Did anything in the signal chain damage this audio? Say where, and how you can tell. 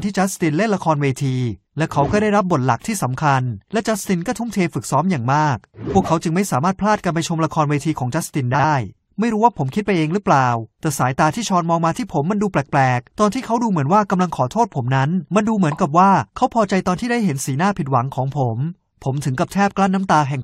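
Yes. Between 8.54 and 8.64 s the speech breaks into a brief garbled flutter. The damage happened at the network or packet-delivery stage: frames out of order. Two neighbouring runs of about 46 ms each, which fits a pair of codec frames per run, arrived swapped and were decoded in that order. The two halves play exchanged, so nothing is missing and the timing afterward stays intact.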